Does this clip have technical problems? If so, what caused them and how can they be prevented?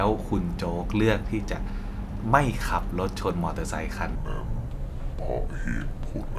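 Yes. From 4.15 s to the end, the audio shows a wrong sample rate: samples were played back slower than they were captured, with no rate conversion. The ratio fits 48 kHz audio being clocked out at 32 kHz. Speed drops to 0.667 times normal and pitch falls by about 7 semitones together, so the speech turns deep and sluggish. To prevent this, resample or declare the correct rate whenever a stream moves between devices or files.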